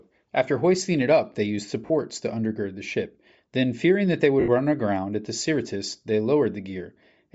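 Throughout, the speech has a breathy, grainy edge. The upper spectrum sounds thinned and partly replaced by noise. This is Bluetooth LC3 compression, likely at a low rate. The damage is plainly audible and fits roughly 32 kbps with 10 ms frames.

At 1.86 s, after "it up they used", lost LE Audio frames leave a 40 ms noisy smear before "to undergird the ship". The decoder repeated the last spectrum with scrambled phase. At 4.40 s, between "fearing that they" and "run aground at the", an 80 ms gap smears, then fades.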